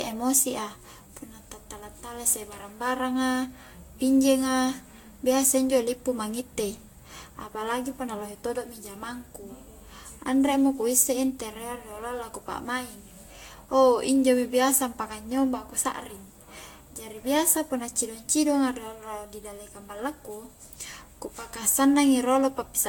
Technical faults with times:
0.00-22.89 generation loss

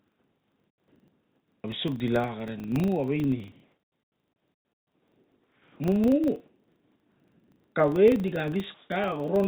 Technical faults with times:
0.00-9.48 filter restarted on every block
0.00-1.64 comfort noise in place of the background
1.61-1.64 onset clipped by the voice detector
3.52-5.80 comfort noise in place of the background
5.66-5.80 onset clipped by the voice detector
6.46-7.76 comfort noise in place of the background
8.74-8.90 comfort noise in place of the background

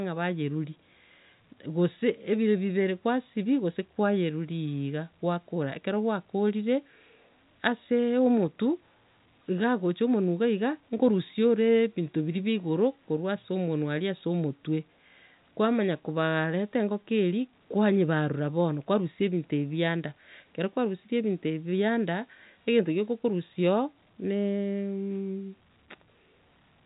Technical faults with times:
none

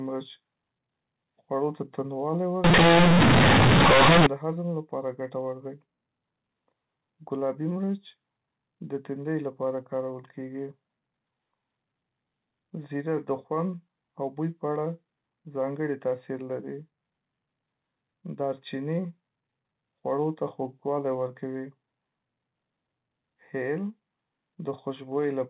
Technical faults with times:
2.64-4.26 companded audio read as linear

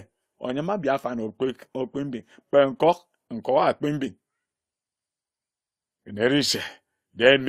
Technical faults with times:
none

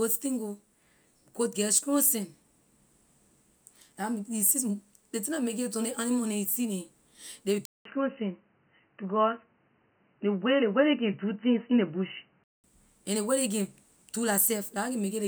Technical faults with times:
7.65-12.64 input switched to a poorer device

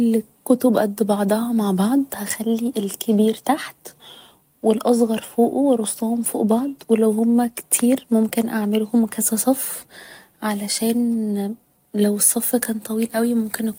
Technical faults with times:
none

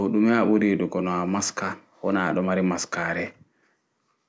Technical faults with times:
none

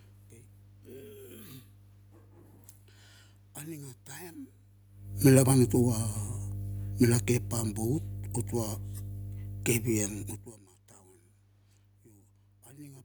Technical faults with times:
0.00-13.04 mains hum
5.11-6.32 automatic gain falling

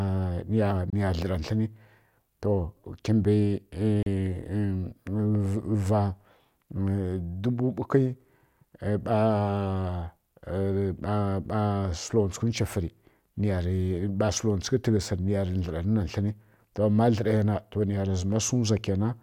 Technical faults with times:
0.90-0.93 gap at a join of encoded pieces
4.03-4.06 gap at a join of encoded pieces

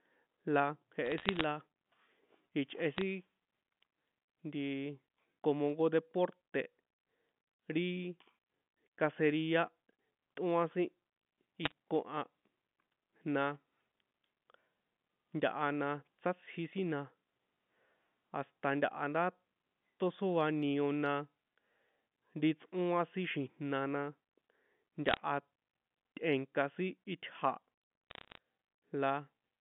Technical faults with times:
1.05-1.44 bit errors on a digital phone line
2.97-3.01 bit errors on a digital phone line
11.64-11.72 bit errors on a digital phone line
25.06-25.17 bit errors on a digital phone line
28.10-28.38 bit errors on a digital phone line

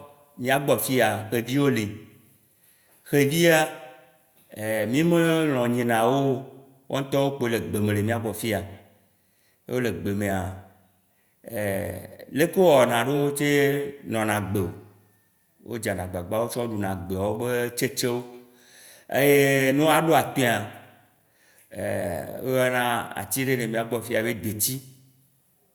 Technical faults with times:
none

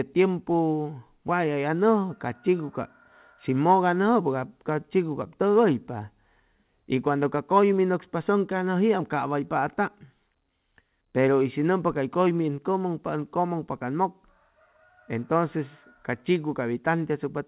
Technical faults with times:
none

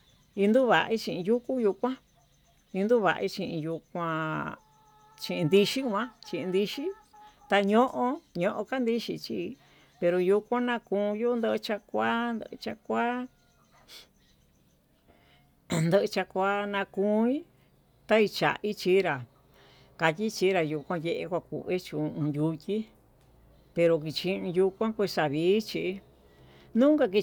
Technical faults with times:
none

